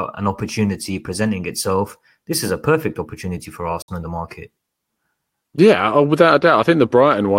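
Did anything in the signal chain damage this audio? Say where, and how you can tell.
Yes. There is a Bluetooth dropout from 3.82 to 3.89 s, in the playback stage over the wireless link. The speech cuts to silence, and it returns further along rather than where it stopped, so about 58 ms of audio is missing, not delayed. The likely cause is that a few packets, which fits about four, reached the headphones too late and were discarded. The output stayed silent until the next good packet arrived.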